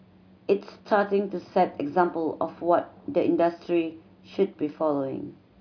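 Listening through this speech recording, nothing stood out as a technical problem at any point.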